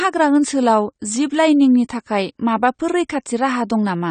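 From start to finish the speech sounds dull and smeared, with nothing above 9 kHz and a fizzy, warbly edge on sibilants. That's likely AAC compression: the encoder starved for bits, fitting something around 32 kbps AAC-LC, chopped the top end and quantised coarsely.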